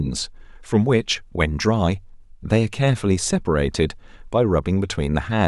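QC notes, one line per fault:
Nothing to flag here; the speech comes across with no technical faults to note.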